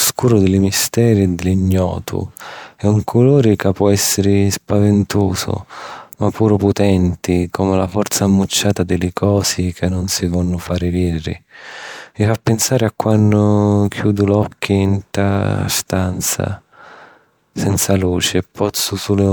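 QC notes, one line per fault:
Nothing to flag here; I listened all the way through and didn't hear any problems.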